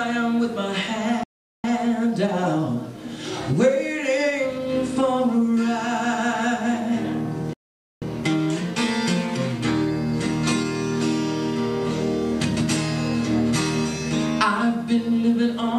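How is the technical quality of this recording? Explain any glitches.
Two playback stalls interrupt the recording. At 1.23 to 1.64 s and 7.53 to 8.02 s the sound cuts out for about 0.40 s and 0.48 s, likely because the player ran short of data. Each gap shows as a flat waveform and a blank spectrogram column before the sound resumes.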